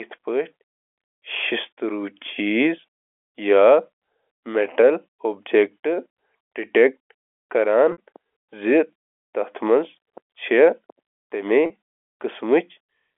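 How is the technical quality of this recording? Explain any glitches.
Two brief dropouts interrupt the speech, which comes through a G.711 telephone channel limited to roughly 300 Hz to 3.4 kHz.

Packet loss with pitch repetition occurs at 7.92 to 7.98 s (60 ms) and 11.66 to 11.70 s (40 ms). Both gaps fit lost 20 ms packets. The receiver filled each gap by repeating the last pitch period, so both sound like a short, held, slightly buzzy tone.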